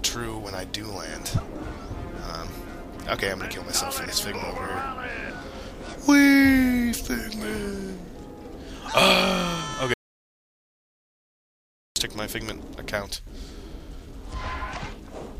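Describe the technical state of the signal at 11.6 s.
At 11.6 s the signal is dead silent, with no room tone at all. This is an audio dropout to silence running from 9.94 to 11.96 s, about 2 seconds lost. The likely cause is an input that dropped out while the recorder kept writing silence.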